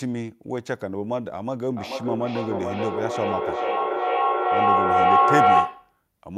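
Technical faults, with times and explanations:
1.77–6.01 s, feedback howl: a second device in the same room picks up the loudspeaker output and sends it back around the call with net gain on each pass. The repeats grow rather than decay and narrow to the frequency the loop favours, here a tone around 700 Hz, pulsing at roughly 400 ms, the loop's round-trip delay. It peaks about 10 dB above the speech and persists until it stops at 6.01 s.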